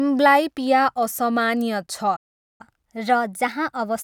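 At 2.16 s the speech cuts out mid-flow and the output stays silent for about 0.43 s, resuming at 2.61 s. This is a playback stall: the player most likely ran out of buffered data or had its thread blocked, so nothing reached the output until it recovered.

From 2.61 s to the end, the speech runs quicker and sits slightly higher, roughly one and a half semitones up. This is catch-up at higher speed: the player resamples its backlog at 1.1 times normal rate to recover the time lost in the stall, raising pitch along with tempo.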